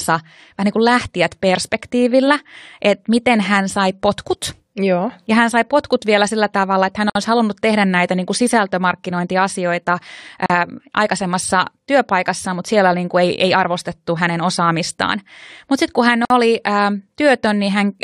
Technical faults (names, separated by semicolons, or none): gap at a join of encoded pieces